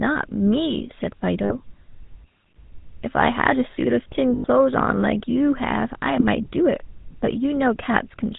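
Throughout, the speech has a buzzy, gravelly roughness with nothing above 4 kHz, typical of the GSM full-rate codec, which fits a 13 kbps stream. It models the vocal tract and drives it with sparse, regularly spaced pulses, discarding fine excitation detail.

At 1.44 to 1.60 s, 4.34 to 4.45 s and 6.20 to 6.47 s, the sound briefly hangs as a rough, metallic ring. These are lost GSM frames, about 60, 100 and 20 ms of missing data, each filled by repeating the last good frame.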